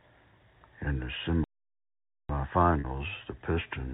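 From 1.44 to 2.29 s the speech halts for about 0.85 s of silence, then resumes. This points to a playback stall, likely the player running short of data.

At 2.80 s a 40 ms gap is bridged by packet loss with pitch repetition, consistent with two lost packets. The last pitch period repeats, giving a brief buzzy hold instead of the stall's dead silence, over the narrowband telephone sound of the G.711 line.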